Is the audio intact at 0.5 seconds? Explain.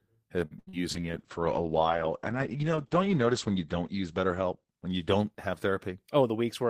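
No. From 0.45 to 0.53 s there is a short stall from a late packet: the jitter buffer ran dry, so the last sound was stretched for about 53 ms and then resumed from the same point, with nothing lost. A spectrogram shows that sound's pattern frozen and smeared sideways. Right after, from 0.59 to 0.69 s, a burst of packet loss fills 81 ms by continuing and fading the last sound, then jumps ahead past about 80 ms of missing audio. The waveform decays, then restarts abruptly.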